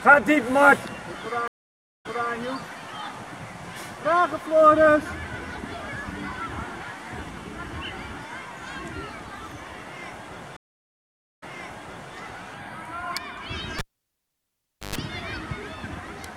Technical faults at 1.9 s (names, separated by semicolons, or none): stream reconnect